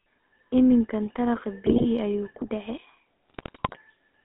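Speech, heard through the GSM full-rate codec from start to end. The sound is buzzy and gravelly. It sits in a narrow band of about 250 Hz to 3.5 kHz. That roughness comes from modelling the voice with coarse, regularly spaced pulses, which fits a 13 kbps stream. GSM bit errors break in twice, from 1.66 to 1.85 s and from 3.29 to 3.78 s. There the voice turns to squawks, pops and gargling. Corrupted filter, pitch and gain values distort the spectrum and level, frame by frame. The second burst is longer.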